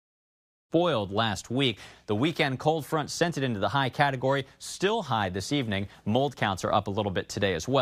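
Nothing stood out on listening to this speech clip; the smooth fade-in at the opening, rising from about half a second to full level by 0.73 s, is an ordinary editing fade.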